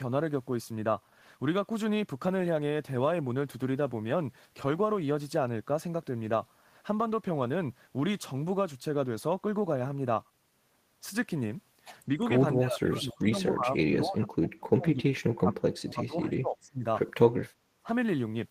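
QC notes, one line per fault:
12.17–12.24 s, 12.56–13.37 s, 13.53–15.07 s, 15.36–16.84 s, 17.78–17.90 s: speech suppressed in double talk. A shallow dip of about 5 dB gives way to cuts of up to about 30 dB lasting over a second, then a brief deep dip. This is likely an echo canceller ducking the near talker while the far end also spoke.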